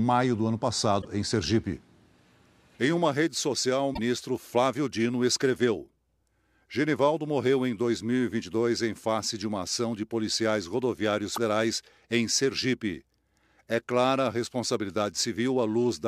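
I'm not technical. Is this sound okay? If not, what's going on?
No. Damaged data in a compressed stream causes brief glitches at 0.98 s (after "do ano"), 3.91 s (after "uma rede social o") and 11.33 s: corrupted file chunks make the decoder stumble, producing short chirps, clicks or gaps.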